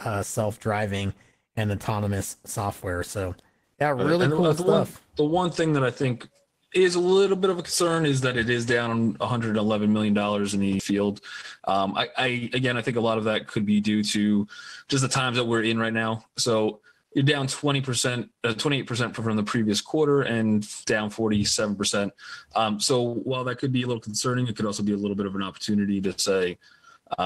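A skip ahead at 10.79 s jumps playback forward with no gap, losing roughly 0.7 s of audio that was dropped while later material was already waiting. Jitter buffer speed-up follows from 11.60 to 11.85 s at 116% and from 12.29 to 14.46 s at 110%: short pitch-period pieces are cut to drain excess delay, hurrying the sound without changing pitch. Channel delay (comb filtering) from 23.13 to 26.05 s makes the sound hollow and phasey, because one channel lags by about 0.7 ms before mono summing, cancelling evenly spaced frequencies from around 700 Hz upward.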